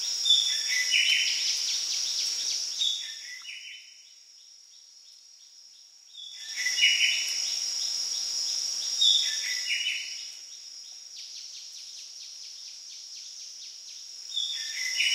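A rapid ticking, like a zip being pulled, rides on the sound from 6.23 to 6.66 s as the level shifts by roughly 20 dB. This is zipper noise: the gain moves in 4 dB jumps, at about ten steps a second, with no smoothing between them, so each jump leaves a small click.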